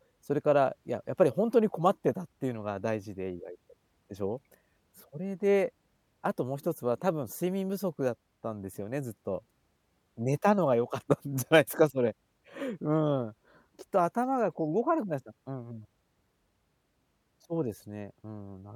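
Nothing stood out on listening to the speech here.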